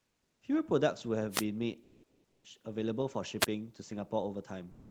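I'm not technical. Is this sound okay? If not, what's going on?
No. Comfort noise in place of the background is heard at 0.00 to 0.41 s, 1.83 to 2.44 s, and from 4.71 s to the end. In those pauses the real room sound is swapped for a flat, featureless hiss, a little quieter at the start and noticeably louder in the later two gaps. The likely cause is the sender stopping transmission during silence, as Opus does in DTX mode, while the receiving end fills the gap with made-up noise.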